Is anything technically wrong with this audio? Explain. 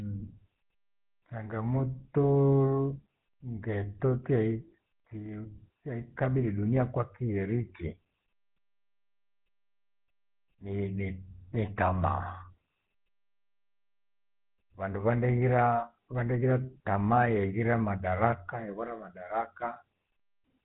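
Yes. Throughout the speech runs a buzzy, gravelly roughness, with nothing above about 3.8 kHz. This is the GSM full-rate codec, consistent with a 13 kbps stream: it models the vocal tract, drives it with sparse regular pulses, and discards the upper band.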